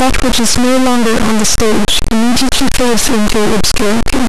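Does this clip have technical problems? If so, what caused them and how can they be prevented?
Yes. A stuck bit distorts the whole speech clip. Every sound has a harsh, buzzy edge. The pauses are not silent. They fill with loud noise. The faulty bit sits high, with a step of roughly -5 dBFS. The likely cause is a broken data line or converter holding it at one value. Test converters and wiring with a walking-bit signal before recording to catch it.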